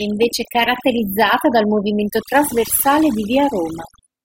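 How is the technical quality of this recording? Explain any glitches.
Technical quality suffers from overdone noise removal running through the whole speech clip. The noise reducer was pushed too hard, so any frequency band sitting near its noise estimate gets pulled way down or shut off. Between phrases you get near-silence with twinkly specks.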